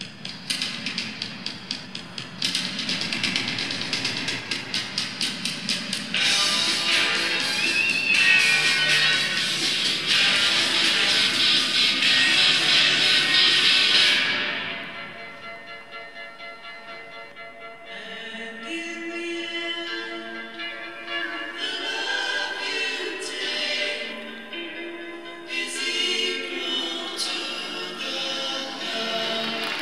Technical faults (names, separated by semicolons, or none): doubled audio track